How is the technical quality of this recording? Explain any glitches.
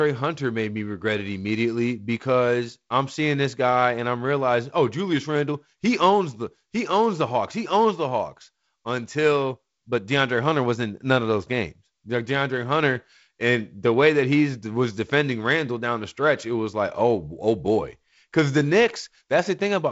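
No glitches turn up anywhere in this speech recording, which comes through G.722 wideband telephone coding at 48 kbit/s with only light codec wear and nothing above about 7.7 kHz, just as that path should sound.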